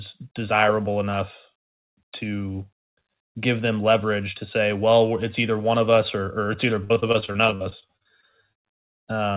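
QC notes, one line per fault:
6.84–8.96 s, repeated packet loss (robotic sound): right after "it's either", over twenty short dropouts, longest 58 ms, are each patched by stretching the previous sound, leaving it choppy; waveform shows repeated, smeared cycles and small holes, and the spectrogram shows vertical breaks beneath the 4 kHz narrowband ceiling.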